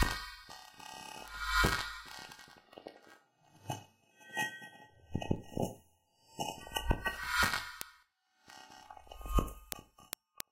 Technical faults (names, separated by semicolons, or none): word clock ticks